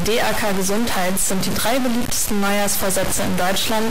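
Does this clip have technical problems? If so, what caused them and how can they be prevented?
Yes. From start to finish the audio carries a harsh, buzzy distortion, and the quiet stretches are filled with a noise bed instead of silence. This points to a stuck bit, likely from a broken data line or converter fault: one fairly high bit stays fixed, so about half the samples are pushed off by a large step near -15 dBFS. Because that bit also flips with the sign of small values, pauses turn into loud noise. To prevent it, check converter and interface wiring and run a bit-pattern test before recording.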